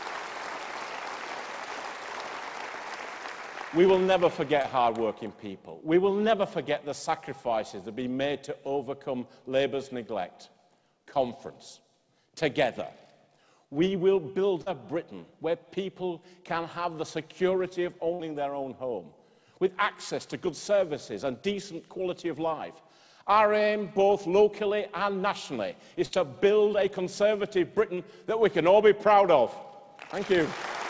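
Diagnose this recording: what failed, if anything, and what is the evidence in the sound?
Short concealed packet loss in the network stage: brief smears at 4.62, 14.62 and 27.95 s, 20 to 40 ms each. The receiver extended the last sound, then blended back into the real audio.

Burst of packet loss, also from the network: about 60 ms vanishes at 18.14 and 26.05 s. Concealment holds and fades the last sound, then audio resumes further on, skipping material.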